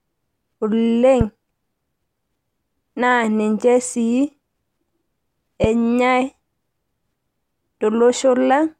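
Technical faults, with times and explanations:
1.21–1.23 s and 5.64–5.66 s, loud pop: single sharp pops roughly 10 dB above the speech, likely from a voltage pulse such as a switch or static discharge; speech continues underneath, unlike a dropout.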